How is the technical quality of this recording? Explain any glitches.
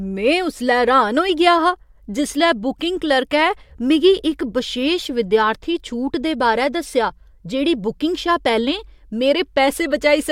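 The technical quality of the recording is sound, with no glitches to explain.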